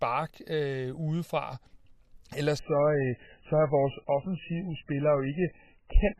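At 2.59 s the adaptive stream suddenly drops to a lower bitrate, muffling the speech. The spectrogram goes empty above 3 kHz, and the waveform shows no gap.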